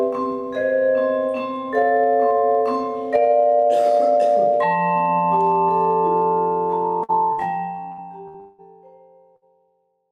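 Bursts of packet loss at 7.03, 7.33, 7.92 and 8.28 s, during the smooth fade-out that begins around 7 s, each drop about 60 ms of audio. The receiver stretches the last sound for 50 to 65 ms as a decaying buzz or hiss. On a spectrogram this appears as short, smeared horizontal bands, and the waveform shows a quick jump where later audio resumes.

From 8.40 to 8.61 s comes a longer gap, likely a network dropout. About 180 ms is missing, and concealment fills all of it with a fading tone and no true silence. It shows as a longer stretch of repeated, dimming spectral texture before a hard restart.

A final burst of packet loss at 9.36 s repeats the pattern, with a roughly 55 ms smear covering another 60 ms gap.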